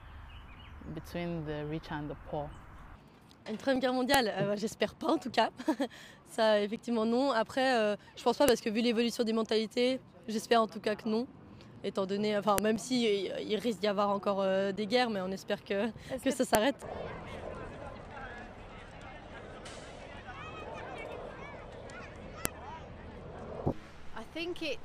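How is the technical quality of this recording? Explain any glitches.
There's a recurring glitch: a file header played as audio, at 4.14, 8.48, 12.58, 16.55 and 22.45 s. Each is a sharp, loud snap. It comes from separate WAV pieces being joined with their headers left in, so those header bytes play back as samples.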